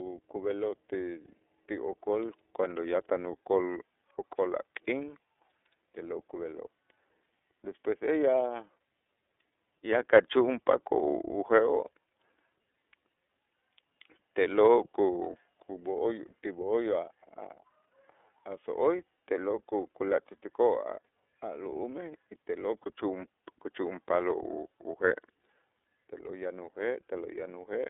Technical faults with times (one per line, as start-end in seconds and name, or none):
0.00-27.89 iLBC codec
12.71-12.74 lost iLBC frames
19.16-19.19 lost iLBC frames
22.83-22.87 lost iLBC frames
25.08-25.11 lost iLBC frames